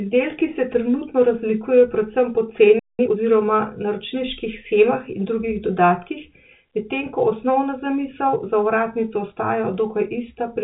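At 2.79 s the speech just drops out for about 195 ms, a playback stall, until 2.99 s. It's a hard gap mid-flow, most likely the player running dry or its thread getting blocked, so nothing reached the output until it recovered.

Right after, from 2.99 to 3.17 s, there's time-compressed catch-up: the player trims its backlog by splicing out small chunks and cross-fading, running at about 2x speed. The speech sounds rushed but keeps its pitch, all within the telephone-band G.711 sound topping out near 3.8 kHz.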